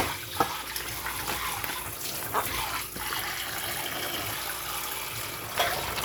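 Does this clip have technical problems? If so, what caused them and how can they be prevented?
No, there's nothing technically wrong to hear in this recording of sounds, so there's nothing here that needs preventing.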